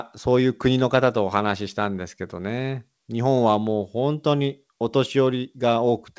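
No technical faults can be heard in this speech.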